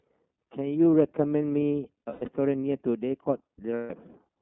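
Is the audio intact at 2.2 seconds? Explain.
No. Between 2.04 and 2.29 s there are lost iLBC frames: about 240 ms of packets missing, scattered over that span, with the longest run around a tenth of a second. The decoder fills each gap by repeating the last pitch cycle mixed with noise, giving a held, slightly buzzy vowel-like sound. The speech snaps back right away because each frame decodes on its own.

Underneath this is the iLBC codec, with a band of 200 Hz to 3.4 kHz and a plainly rough, synthetic texture. This fits its 13.33 kbps, 30 ms frame mode.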